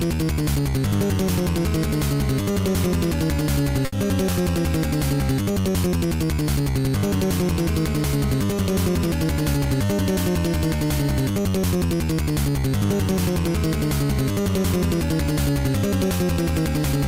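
At 3.85 to 3.94 s a short stall from a late packet holds the sound for 70 ms with a slight buzz or dip; the waveform repeats the last sound's cycles and spectrogram partials smear flat.

From 8.98 to 9.60 s a jitter buffer speed-up trims short pitch-period pieces, about 70 ms in all, so the sound runs 109% fast and hurried at unchanged pitch, with events visibly compressed in time.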